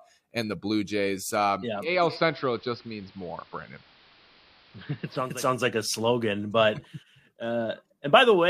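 From 1.73 to 5.49 s the speech turns hissy and dull and about 1 dB quieter, fading over 452 ms each way: digital radio blending to analogue, the receiver losing the digital stream and cross-fading to the station's AM broadcast, then back.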